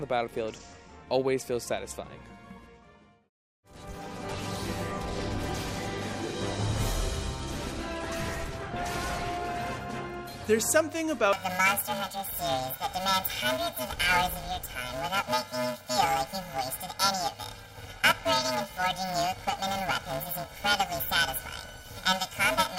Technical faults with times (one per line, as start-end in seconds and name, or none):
11.33-22.79 planar audio read as interleaved